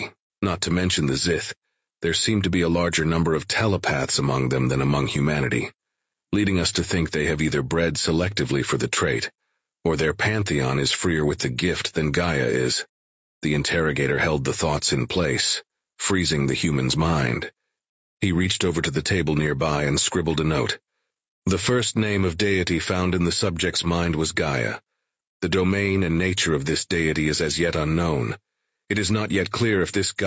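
The input gain is likely set far too high for the microphone, so a fast limiter or compressor clamps down on every loud syllable across the full length of the speech. The result is gain pumping: the level swings by roughly 5 dB as the limiter pulls it down and lets it back up. Loud and quiet passages sit unnaturally close together, giving the voice a squashed, breathing quality within the call's limited band, which stops at 8 kHz.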